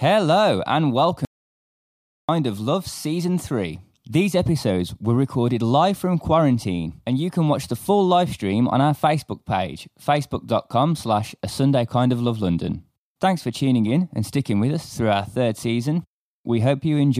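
At 1.25 s the speech cuts off abruptly. An audio dropout to silence follows and lasts until 2.29 s, about 1.04 s in all. The gap is silent, with no room tone or background hiss underneath. The speech then resumes in mid-flow. Whatever was spoken during that second is missing. The input signal was likely lost for a moment, through a disconnected device, a broken link or a brief mute, while the recorder kept writing silence.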